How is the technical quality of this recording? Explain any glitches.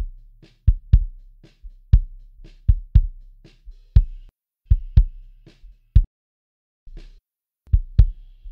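The recording has one clear glitch: a playback stall from 6.04 to 6.87 s. The sound cuts out in mid-flow and the output drops to silence for roughly 0.83 s before it resumes. The likely cause is the player running short of buffered data, or its playback thread being briefly blocked. Nothing reached the output until it recovered, so the audio simply stops and then continues.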